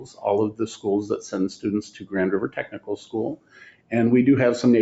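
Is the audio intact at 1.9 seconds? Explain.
No. From 1.85 to 2.14 s the sound sinks sharply, dipping by about 13 dB at its deepest, so for roughly 300 ms it seems pulled away and then returns. This is sound cut by the noise suppressor. A suppressor built for speech judged this stretch to be noise and turned it down harder than its surroundings. Steady or fading parts of the signal drop, while any sudden onsets mostly pass through.

That dip sits within a wider problem: a noise suppressor applied to music or sounds. Across the clip the level keeps swelling and shrinking by around 15 dB, giving a pumping, fluttering, thinned-out quality. The suppressor treats sustained tones, ambience and decaying tails as noise and keeps pulling them down between attacks. Around 1.9 s this steady pumping is what the deeper cut rides on.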